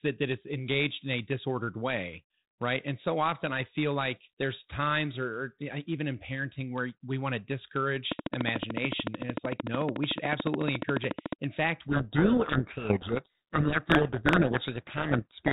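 From 8.12 to 11.34 s, a train of clicks ticks over the speech. About fifty sharp pulses arrive at a steady 13.7 per second. Each click peaks about 20 dB above the speech. They share one shape. The likely cause is interference from nearby equipment or a struggling interface.

From 11.88 s to the end, a codec payload misread takes over. The G.726 decoder takes in each code word with its bits in the wrong order. The speech is buried in harsh, rasping distortion. The 32 kbit/s path's 4 kHz band limit still shows.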